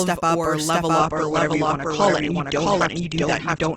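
It's a speech clip with a doubled audio track the whole way through: a second copy runs around 0.7 s behind at roughly the same level, most likely two copies held out of step. Then at 0.98 s, right after "step up or level", an adaptive stream at a lower bitrate takes over until the end, cutting everything above 8.3 kHz and adding codec smearing, which points to a switch from a comfortable bitrate down to a very low one.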